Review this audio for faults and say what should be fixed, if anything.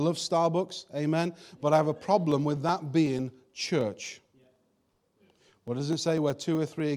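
Periodic USB or driver dropouts run from 2.32 to 6.80 s, after "but I have a". About half a millisecond is skipped every 0.124 s, giving some forty evenly spaced ticks that stop in pauses, unlike random crackle. Moving the interface to a dedicated USB port prevents it.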